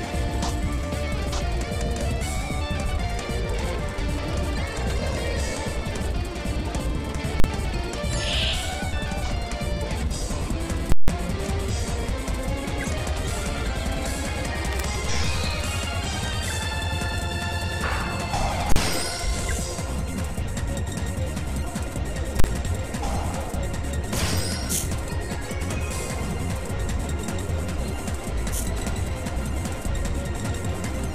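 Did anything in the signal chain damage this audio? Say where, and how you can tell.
Yes. Invalid numbers at full scale, from sample-format conversion: infinite or invalid values were clamped to maximum level. The 40 ms blocks at 7.40, 18.72 and 22.40 s are single bangs. The 160 ms block at 10.92–11.08 s pops at each edge with silence between.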